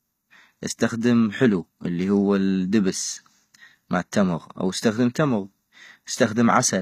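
Throughout, likely HE-AAC compression rebuilt the treble from copied lower bands, so s sounds turn gritty and lispy, with nothing above 14.9 kHz.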